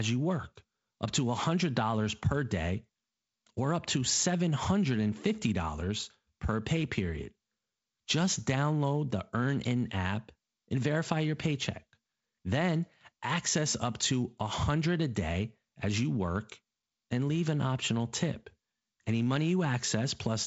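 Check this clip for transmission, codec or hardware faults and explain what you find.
No transmission, codec or hardware faults found.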